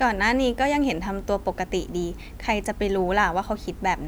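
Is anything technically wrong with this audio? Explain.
No, nothing technically wrong can be heard in this speech recording. There are no audible faults anywhere in it to explain.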